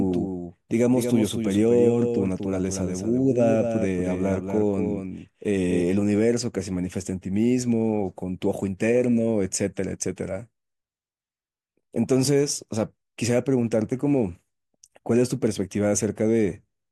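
From the very start until 5.82 s, the speech has a doubled audio track. A second full-band copy trails the original by around a fifth of a second. It sits roughly 5 dB below the main signal. It carries no decay and no room colour, so it sounds like a flat, detached echo. At 5.82 s it cuts out abruptly. The likely cause is the same audio being captured twice through a slower second path.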